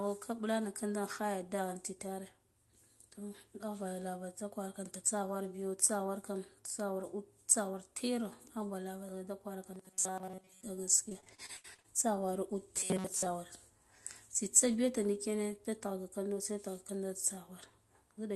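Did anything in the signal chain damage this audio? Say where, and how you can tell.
Yes, in three places. Between 9.72 and 10.63 s, and again from 12.76 to 13.26 s, the speech collapses into a stiff metallic buzz pitched at 188 Hz that still loosely tracks the syllables. That's robotic sound from repeated short buffers, most likely at the driver or buffer stage. Audio stopped arriving in time, so the same tiny slice was replayed over and over. A 188 Hz buzz means a repeat period of about 5.3 ms, and most of each stretch is recycled rather than real signal.

The other one is network-side. From 11.09 to 11.86 s there's repeated packet loss, which also sounds robotic but is choppier. You get a quick run of dropouts, each patched by stretching the last bit of sound, and the next one lands before the speech can recover. About 0.3 s of real audio goes missing in total, with the longest hole 72 ms, and roughly 37% of that span is concealment rather than actual speech.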